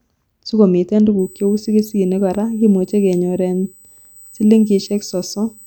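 USB whine from 1.19 s onward: 125-microsecond bus microframes leak in through power or ground, giving a faint fixed 8 kHz whine peaking at 16 kHz.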